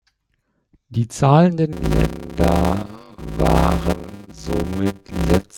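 A speech clip with a block size mismatch (padded) from 1.72 s through to the end. A steady 100 Hz buzz appears there, and the speech drags at about 0.53 times normal speed while keeping its timbre. Each block read downstream is only partly filled with real samples, and the remainder is zero-padded. The resulting short silence in every block produces the buzz at the block rate. The ratio fits 256-sample writes into blocks of about 480 samples.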